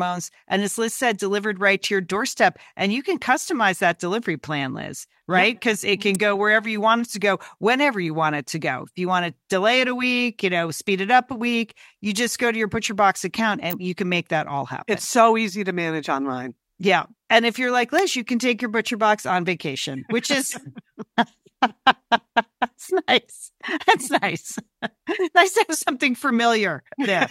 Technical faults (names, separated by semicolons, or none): electrical switching spike